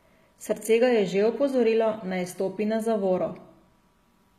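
Across the whole speech clip the top end sounds bright but synthetic: s sounds come out gritty and lispy, with a metallic sheen on the upper harmonics, and nothing at all is left above about 14.9 kHz. That points to HE-AAC compression at a low bitrate, likely around 20 kbps, where only the lower spectrum is truly coded and the treble is rebuilt by copying lower bands upward under a coarse envelope, so the regenerated harmonics no longer match the real ones.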